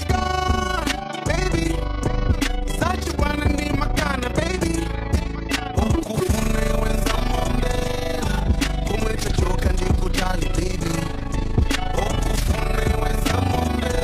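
A fast, rough flutter runs through the whole clip, giving the sound a rough tremolo as the level pumps up and down by about 11 dB, around 30 times a second. This is overlap-add ripple: the audio was split into windowed frames and rejoined with overlaps that fail to sum to a steady gain, so loudness dips once per frame.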